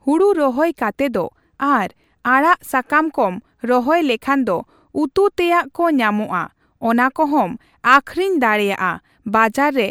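No technical faults are audible.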